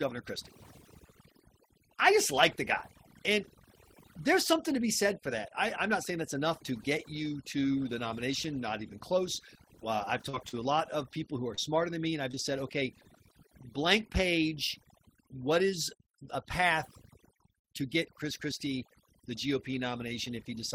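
Speech over a near-silent background flecked with twinkling specks shows overdone noise removal: bands near the noise estimate were cut, and quieter parts of the voice went with them. Brief smears or wobbles at 10.29, 10.49 (just before "a lot of people"), 11.55 (after "of people who are") and 12.31 s (just before "said okay") are short concealed packet loss, where gaps of roughly 20 to 40 ms were filled by extending the preceding sound.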